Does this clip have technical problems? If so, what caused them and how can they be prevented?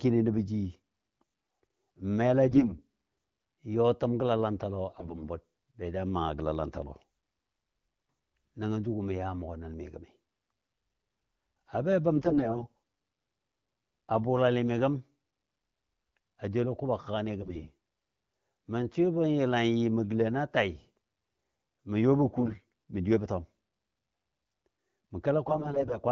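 Yes. AMR bit errors make the speech hoarse, scratchy and gargly at 2.48–2.75 s, 4.88–5.29 s (just before "bud be ja maa"), 12.16–12.77 s, 17.39–17.72 s, 22.26–22.63 s and 25.46–25.98 s, over the light AMR-WB coding at 12.65 kbit/s. On a weak link, a fair share of the less protected bits in each frame arrived flipped. The checksum over the critical bits still passed, so the damaged frames were decoded anyway, with misplaced excitation pulses and skewed gain and spectral values. Pitch and level hold while the texture roughens. Unlike packet loss, nothing drops out, mutes or repeats. Stronger channel coding or better radio coverage would prevent it.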